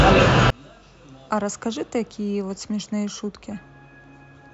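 One channel inverted, from 0.50 s to the end: the speech drops by about 34 dB to a faint residue. The likely cause is reversed polarity on one stereo channel, so the centred speech, common to both channels, cancels when they are summed to mono.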